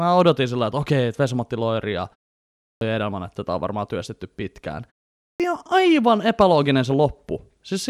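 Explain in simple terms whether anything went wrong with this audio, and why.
Speech restarts abruptly after two short pauses, at 2.57 s and 5.18 s, with the first quarter-second or so missing each time. This is a clipped start after a pause: the playback device dozes off during the silence and needs time to wake.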